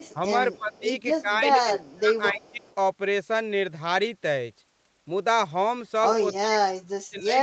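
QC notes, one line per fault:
0.54–0.8 s, 1.8–1.93 s and 2.39–2.75 s, echo leak: a faint repeat of the speech trails the original by about 280 ms, roughly 30 dB down. It's likely a far-end speakerphone whose echo canceller let some loudspeaker pickup slip back into the call.
0.58–0.85 s, 1.21–2.62 s and 6.4 s to the end, speech suppressed in double talk: the talker ducks while the far side is playing on the loudspeaker, by roughly 15 dB at first, 20 dB across the middle stretch, and nearly 40 dB at the end. It's likely the canceller clamping down on both its own talker and the loudspeaker echo during overlap.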